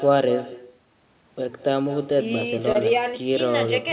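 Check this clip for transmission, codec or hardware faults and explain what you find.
Two faults are audible: an echo that runs through the whole speech clip, and one brief packet-loss glitch.

Echo with no canceller, throughout: every phrase is trailed by a fainter, thinner copy arriving roughly a fifth of a second later, sitting about 15 dB below the direct speech. The far end was evidently playing the call on a loudspeaker, and its microphone caught that playback and returned it. With no echo canceller to subtract it, the sound comes back after the network round trip, already band-limited to below 4 kHz like the rest of the audio.

Short concealed packet loss, 2.72 to 2.87 s: a short smear breaks the flow, a wobble where the sound briefly stretches and then blends back. About 20 ms of audio did not reach the decoder in time. The receiver bridged the gap with roughly 25 ms of synthesized continuation, extending the preceding sound from its pitch or as shaped noise, and then dropped about 9 ms to catch up as it blended back into the real signal.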